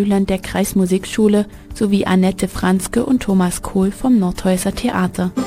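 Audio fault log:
throughout, crude rate conversion: the audio was resampled by simply dropping samples with no filtering, which fits a 48 kHz to 44.1 kHz change. That repeating skip pattern adds inharmonic tones roughly 25 dB below the signal, heard as a gritty fizz that follows loud and high content.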